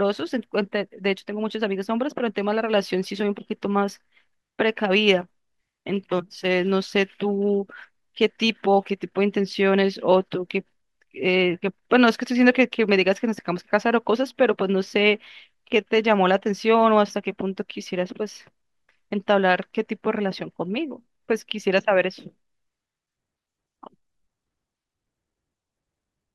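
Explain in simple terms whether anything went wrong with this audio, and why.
Listening carefully to the whole speech recording, nothing stood out as having gone wrong.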